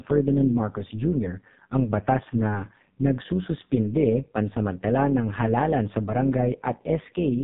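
From start to finish the speech has gone through the AMR narrowband mobile codec, with nothing above 4 kHz. It's heavily buzzy and synthetic, which fits AMR-NB's low 5.15 kbps mode. On top of that there's overlap-add ripple: frames were rejoined without a constant-gain overlap, so the level pumps by about 6 dB at around 100 Hz, giving a metallic buzz with extra tones around the voice.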